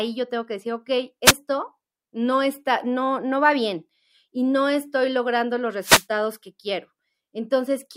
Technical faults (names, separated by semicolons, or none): wireless microphone noise hit